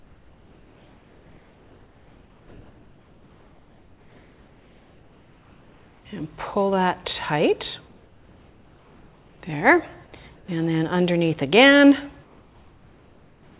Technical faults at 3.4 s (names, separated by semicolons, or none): comfort noise in place of the background